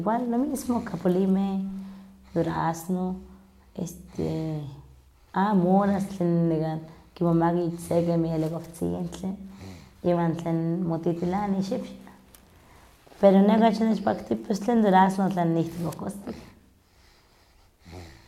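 There are no technical faults to describe at any point in the clip.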